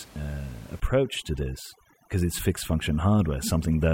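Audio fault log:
0.8–3.94 s, overdone noise removal: a noise reduction stage set far too aggressively begins pulling individual frequency bands down, or switching them off, whenever their level sits close to its noise estimate. The room noise, about 23 dB below the speech, is treated as the target, so the background drops and breaks up into twinkling specks, while the softer parts of the speech spectrum are removed along with it.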